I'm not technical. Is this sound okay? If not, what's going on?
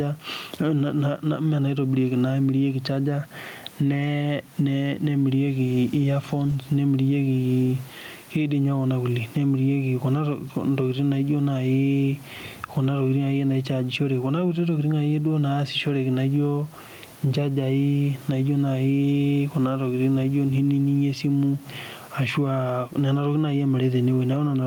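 No. The recording has gain pumping from start to finish. Each time the speech gets loud, the background level drops noticeably, then swells back up in the pauses. The likely cause is a microphone level set far too high, with an automatic limiter quickly pulling it down on every loud moment and releasing it afterwards. The room's own background noise, which is always there, is what you hear rising and falling, and the speech sounds squashed and flat in loudness.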